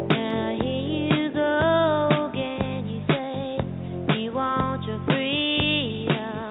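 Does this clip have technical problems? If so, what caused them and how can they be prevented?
No, nothing in this one sounds off to me, so there's nothing here that needs fixing or preventing.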